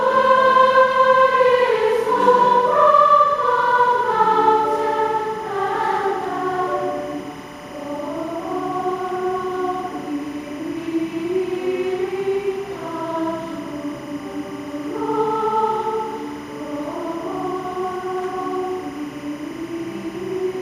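Timecode bleed runs throughout, from start to finish. Linear timecode at 25 frames per second leaks in from an adjacent track or cable. Its square wave flips between roughly 1 and 2 kHz, giving a steady chirping warble well below the sound, somewhere near 20 dB down.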